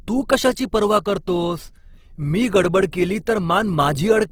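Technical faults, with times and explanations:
Throughout, Opus compression: the speech sounds grainy and rough, with bands filled in by noise, which fits a likely Opus encode at around 16 kbps in music mode.
2.92 s, pre-echo: a short hiss creeps in about 14 ms before a sharp attack, because the codec spread its quantisation noise across the whole block.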